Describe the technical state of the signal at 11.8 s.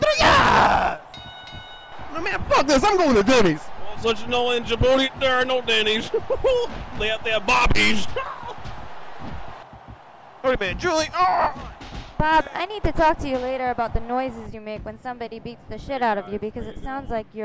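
At 11.8 s the signal is intact, with no audible fault at that point.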